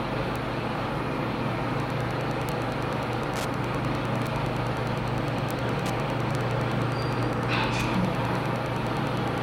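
A recording of everyday sound carries two faults. Single bits flipped in memory or on a digital link, each throwing one sample, or three consecutive samples at 6.35 s, off by a power of two before it snaps back. These bit error spikes are heard as isolated sharp ticks at 0.36, 2.49, 4.27, 5.51 and 6.35 s, broadband and unrelated to the surrounding sound. From 1.78 s to the end, a nearby Wi-Fi radio's beacon transmissions, repeating every 102.4 ms, are being picked up and rectified by the audio circuitry. This Wi-Fi interference comes through as a steady ticking about ten times a second, sitting roughly 20 dB below the sound itself.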